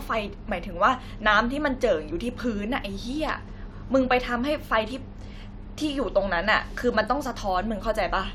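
Nothing goes wrong anywhere in this bit of speech, so there's no technical fault to point out here.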